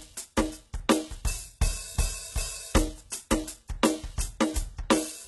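Throughout the music, the treble sounds gritty and metallic. Nothing reaches above 11.8 kHz. Likely HE-AAC compression at a very low bitrate, rebuilding the highs from copied lower bands.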